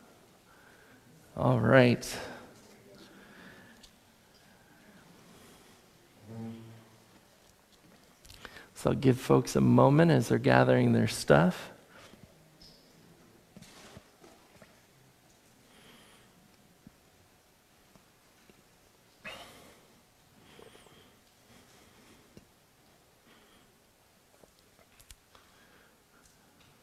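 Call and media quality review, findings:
Nothing stood out on listening, and no findings are raised for this call audio.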